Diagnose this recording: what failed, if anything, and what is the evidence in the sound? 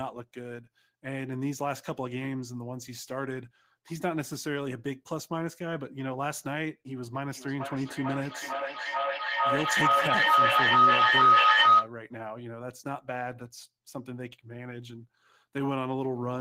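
A feedback howl in the acoustic loop between two devices on the call runs from 7.14 to 11.93 s. A tone near 1.5 kHz climbs to about 12 dB above the speech, pulsing roughly every 400 ms, as each microphone-to-loudspeaker trip adds gain.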